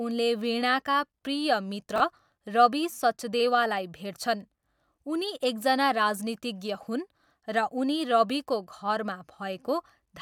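A speech recording with a brief garbled, jumbled moment from 1.96 to 2.0 s, just before "रबी सचदेवालाई भेट्छन्". This is chunks out of order: a 20 ms chunk arrived one chunk late and played after its successor, leaving nothing missing but the sequence scrambled and three abrupt joins.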